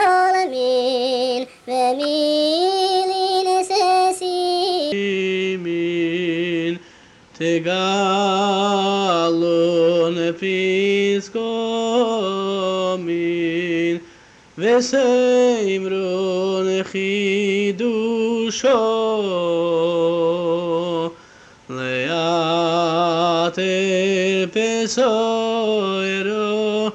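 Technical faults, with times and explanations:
0.00–4.92 s, wrong sample rate: the sound runs 1.5 times fast and about 7 semitones high, which fits 32 kHz material played at 48 kHz without conversion.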